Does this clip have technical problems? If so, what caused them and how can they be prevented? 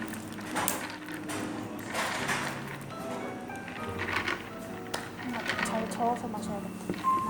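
Yes. From 4.12 s to 7.12 s a video or display buzz sits about 25 dB below the sound: a 50 Hz buzz at the picture's field rate, with hash above it and a high whistle near 15.6 kHz from the line scan, all coupled in from a screen or video cable. The accompanying line-rate tone and hash separate it from plain mains hum, which would be a smoother 50 Hz tone with its harmonics and no whistle. It can be prevented by routing audio cables away from displays and video leads and using balanced, well-shielded connections.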